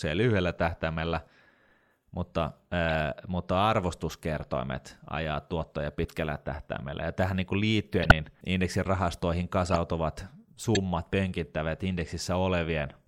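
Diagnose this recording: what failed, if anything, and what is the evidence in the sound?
The codec stage failed: corrupt frames were decoded and played. Short chirps and noise bursts land at 2.88–2.93 s (just before "mutta arvostuskertoimet ajaa tuottoja"), 6.03–6.12 s (just after that phrase), 8.02–8.12 s (between "tähän niin" and "indeksin rahastoihin"), 9.67–9.77 s and 10.75–10.77 s. Each lasts a few frames, and the loudest peaks at about -5 dBFS. Flipped bits make the decoder place energy at wrong frequencies. Packet-loss concealment would instead give smooth fills or dropouts, not foreign tones.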